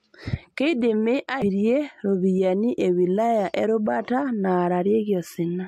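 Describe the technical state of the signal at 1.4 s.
At about 1.42 s the compressed stream carries damaged data: some of the data in that stretch is corrupt, so the decoder cannot read the frame properly, loses sync and has to hunt forward for the next valid frame header before it can resume. For the listener this is a very short blip lasting about 16 ms (1.418–1.434 s) that interrupts the speech before normal decoding picks up again.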